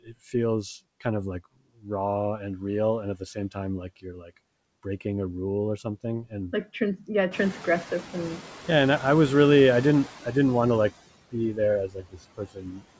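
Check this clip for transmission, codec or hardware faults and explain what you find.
The faults here come from the noise suppressor, not from the call link or hardware. Nothing is heard above 8 kHz, which fits a wideband call codec such as G.722 at 64 kbps.

Noise suppressor artifacts run through the whole clip. The suppressor pulls down bands it judges to be steady noise, frame by frame, by about 19 dB. Between phrases the background sinks, then rises again under the speech.

Speech cut by the noise suppressor happens at 0.03–0.14 s, 1.75–1.89 s, 3.16–3.57 s, 4.02–4.31 s, and from 11.87 s to the end. Quiet speech fell below the suppressor's threshold and was treated as noise. The drops are about 15, 19, 12, 16 and 21 dB. Those parts sound swallowed or faint.

Noise suppressor catching up occurs from 7.31 to 8.49 s. The room noise jumps by about 16 dB near 7.5 s. The suppressor's noise estimate trails this rise for 1.18 s. 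The louder background leaks through at first, with only about 8 dB of reduction, then fades as the estimate adapts.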